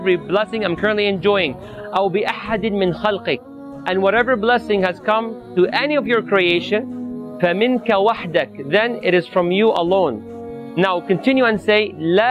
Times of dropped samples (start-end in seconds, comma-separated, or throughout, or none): 6.50